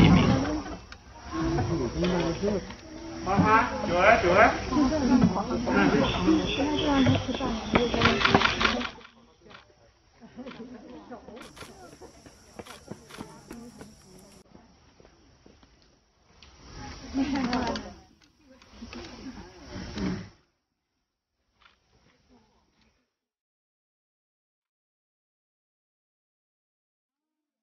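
Nothing is technically wrong with the clip.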